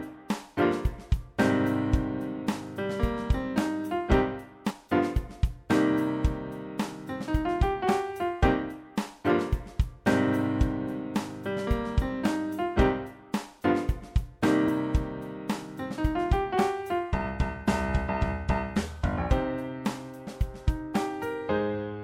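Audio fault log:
4.69 s and 14.67 s, compressed frames skipped: the audio jumps ahead by roughly 50 ms and then 30 ms, which fits two and then one whole codec frame of about 26 ms not being played. Unlike a dropout there is no silent gap, and because neighbouring frames overlap, each join is a short smeared blip rather than a sharp click.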